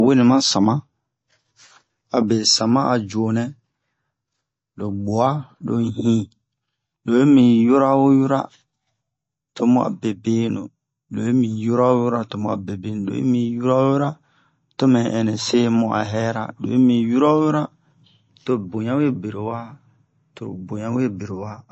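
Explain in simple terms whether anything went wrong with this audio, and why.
The speech sounds dull and watery from start to finish, with nothing above 8 kHz, most likely from heavy MP3 compression discarding treble and fine detail.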